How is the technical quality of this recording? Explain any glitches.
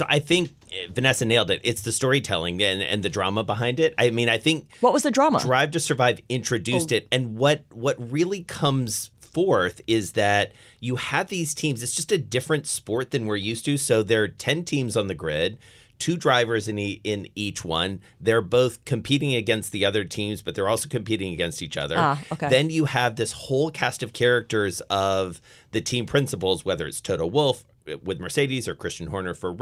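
No glitches can be heard anywhere in the recording: the signal holds steady throughout, with no dropouts, clicks or other technical disturbances to explain.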